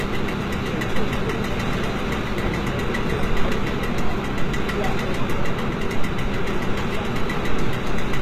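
HE-AAC compression shapes the sound from start to finish, and is likely the cause of the damage heard here. The lower spectrum is coded directly, while the treble is synthesised by spectral band replication, lower bands copied upward and fitted to a coarse envelope. The top end stays bright but is not the original, so its harmonics fail to line up with those below, giving a gritty, metallic sheen. Nothing survives above 14.9 kHz, and the plainly audible damage fits a bitrate around 20 kbps.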